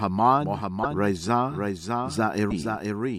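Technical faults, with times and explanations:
Throughout: doubled audio track. A second full-band copy of the sound runs behind the original by roughly 0.7 s, about 5 dB quieter. It has no decay and no room colour, so it reads as a clean repeat, not an echo. Where it enters and leaves, it does so abruptly. The likely cause is the same signal being captured twice, once through a slower path, or an edit that left two copies out of step.
0.82 to 0.86 s and 2.50 to 2.52 s: broken MP3 bit reservoir. At each point the sound skips forward and a brief glitch replaces it for a few hundredths of a second. The timing spans about one or two frames of 26.1 ms, which fits MP3 at a 44.1 kHz rate. The likely cause is missing frames. The next frame then reaches back for reserved data and decodes bytes belonging to another frame.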